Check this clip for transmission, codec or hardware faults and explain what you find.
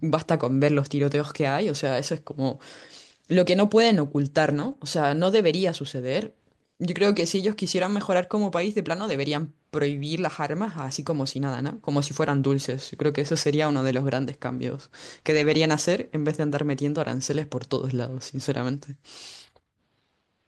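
The speech shows packet loss recovered by a lost packet rebuilt from error correction at 4.51, 7.11, 9.03, 9.91 and 15.33 s. Each lost packet was replaced by a low-bitrate copy carried in the next one, so nothing drops out, but each patch of about 80 to 120 ms sounds rougher and noisier.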